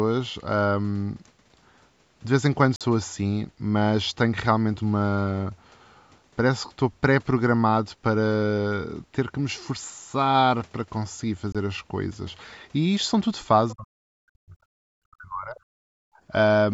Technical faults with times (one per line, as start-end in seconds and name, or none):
2.76-2.81 Bluetooth dropout
11.52-11.55 Bluetooth dropout
13.73-15.58 speech suppressed in double talk
15.86-16.24 background gated by the echo canceller